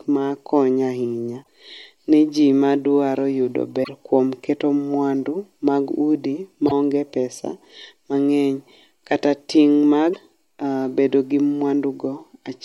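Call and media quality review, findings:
Damaged data in a compressed stream: corrupted frames make the decoder misread or lose sync and hunt for the next header. Short glitches in the speech at 1.40–1.47 s, 3.80–3.89 s (after "madwaro yudo"), 6.65–6.72 s and 10.10–10.15 s, each about 56–84 ms.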